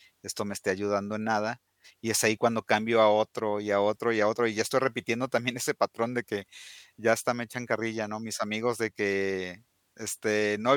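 No technical faults can be heard anywhere in this recording.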